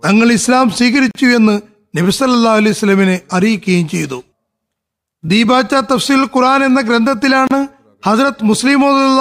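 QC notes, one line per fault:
1.11–1.15 s: gap at a join of encoded pieces. The speech drops out for about 40 ms, its edges smeared by the codec, then resumes where it stopped. The pieces were encoded separately and joined untrimmed, so one run's end-frame padding and the next run's start-up delay both remain as silence.
7.47–7.51 s: gap at a join of encoded pieces. The same mechanism produces a second silence of about 35 ms.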